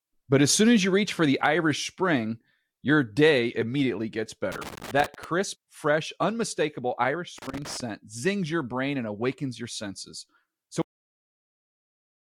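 Loose connector crackle breaks into this speech clip twice, from 4.52 to 5.24 s and again from 7.38 to 7.81 s, as irregular bursts of scratchy crackle riding over the voice. A worn or dirty contact somewhere in the signal chain is making and breaking as it shifts, chopping the signal on and off in rapid, uneven fragments, giving the ragged texture. A cut-off end follows at 10.82 s, where the audio stops dead partway through a sound and drops straight to digital silence with no natural decay. The final stretch of buffers was never written or played out, so the recording simply ends mid-sound rather than fading or finishing the utterance.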